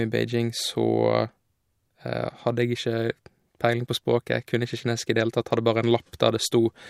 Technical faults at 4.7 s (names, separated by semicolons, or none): none